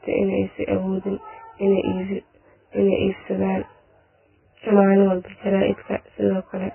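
From start to finish the speech carries a channel delay with comb filtering. One channel arrives roughly 20 ms after the other, and when the two are folded to mono the shared content cancels at a regular series of frequencies, the first near 30 Hz and the rest stacked closely above it at intervals of around 50 Hz. The result is a rough, slightly doubled quality that stays fixed in place, since the delay does not change over the clip.

Also present throughout is heavy coding damage, likely from Vorbis compression at a very low bitrate, in the region of 10 kbps. Nothing is left above 3 kHz, so the top end is gone and the speech sounds muffled. Within the remaining band, the fine spectral detail has been quantised so coarsely that it turns into grainy noise of similar level, which roughens voiced tones and smears consonant onsets.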